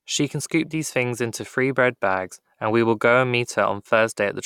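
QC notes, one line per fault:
No faults found in the speech; nothing to log.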